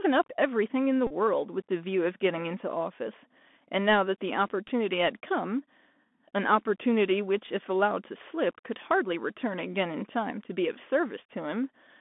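From the start, the whole recording carries the Bluetooth CVSD headset codec: band-limited to roughly 200 Hz to 3.5 kHz, with a grainy hiss under the speech, scratchy s sounds and slurring on loud bright bits, where the one-bit up/down coder can't step fast enough.

Then come two Bluetooth headset packet repeats. Between 1.07 and 1.13 s lost packets get replaced by replaying the last one over and over, and that 3.75 ms repetition turns into a short buzz near 267 Hz. At 4.68 s there's a much briefer repeat, a quick little buzzy tick.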